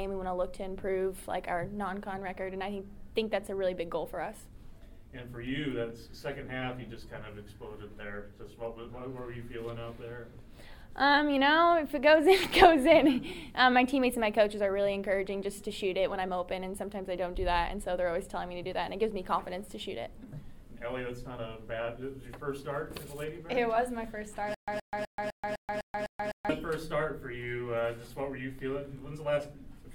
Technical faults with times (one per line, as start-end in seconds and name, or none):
24.54-26.49 stutter with silent gaps